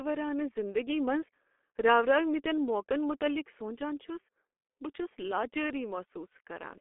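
Throughout, the speech passes through a heavily compressed G.723.1 codec whose slowly updated voice model and 30 ms frames fit a rate near 6.3 kbit/s. The line keeps roughly 250 Hz to 3.4 kHz, with nothing above 3.6 kHz, so the voice sounds muffled and hoarse, with consonants smeared.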